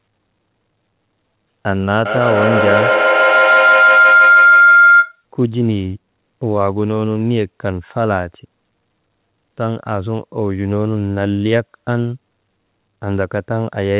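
A speech clip in which, from 2.05 to 5.24 s, a shrill tone around 1.5 kHz swells until it sits about 8 dB above the speech, with the loop repeating roughly every 150 ms. This is feedback howl: two devices in one room share the call, so sound loops from loudspeaker to microphone, gaining level each pass and narrowing to that favoured frequency. The audio carries nothing above 4 kHz, which points to a narrowband telephone codec on the call path.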